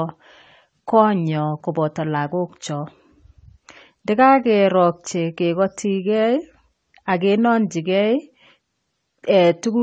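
Low-bitrate audio saved at a high bitrate, throughout this speech clip: nothing sounds above 14 kHz, and the thin, smeared detail points to a likely earlier low-bitrate encode that re-saving at high bitrate couldn't restore.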